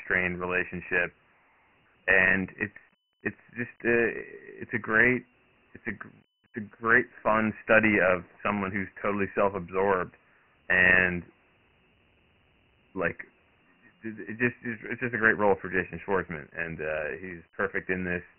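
From start to finish the speech sounds gritty and muffled, with nothing above 3 kHz: heavy Dialogic VOX ADPCM damage, 4-bit coding at 24 kbps, fitting a 6,000-sample rate.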